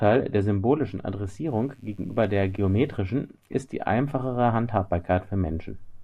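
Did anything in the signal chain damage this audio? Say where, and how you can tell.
Yes: mains buzz got into the analogue wiring, where 50 Hz switching spikes and harmonics leaked in, leaving a faint, raspy buzz from 1.47 to 2.97 s.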